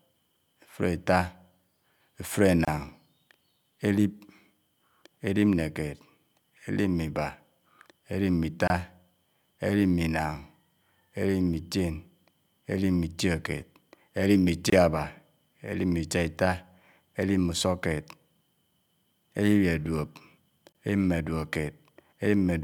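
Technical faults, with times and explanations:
2.65, 8.68, 14.70 and 20.72 s, gap at a join of encoded pieces: untrimmed encoder delay and padding leave 24–27 ms silences every 6 s, seen as narrow blank vertical stripes.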